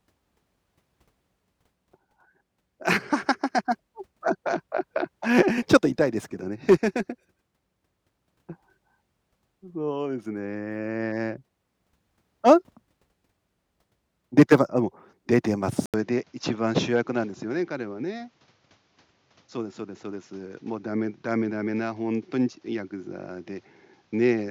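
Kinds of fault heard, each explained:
Input switched to a poorer device: at 15.86 s, after an 80 ms gap, the speech turns duller and quieter, likely from a lower-grade microphone. A spectrogram shows nothing above 7.3 kHz from there, plus a faint new noise floor; the waveform shrinks about 5 dB.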